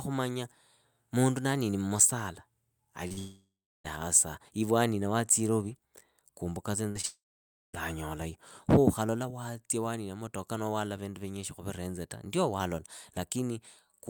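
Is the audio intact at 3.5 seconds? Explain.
No. A long network dropout, likely a stall in packet delivery, cut the incoming audio from 3.19 to 3.86 s. The receiver stretched the last sound into a fading buzz or hiss, then left about 350 ms of silence, and speech resumes with 0.66 s lost.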